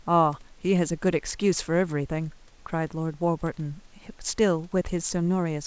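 Nothing stood out on listening to this speech clip; what is heard fits a normal call path, with no content above 8 kHz, and a faint room background sitting about 39 dB below the speech.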